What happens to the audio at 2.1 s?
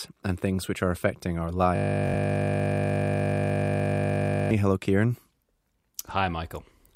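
At 2.1 s the audio is inside a system hang loop running from 1.76 s to 4.51 s. The machine stalled while the output hardware kept replaying one 20 ms stretch of its ring buffer, so a single slice repeats exactly over a hundred times, heard as a steady 50 Hz buzz.

Overlapping that, a Bluetooth stutter spans 2.07 s to 2.14 s. Packets arrived late or were lost, and the receiver replayed its last buffer until new data came. About 64 ms of audio is lost, which fits three dropped frames. This adds a brief run of repeated slices, and the sound then resumes as though it had played on through the gap.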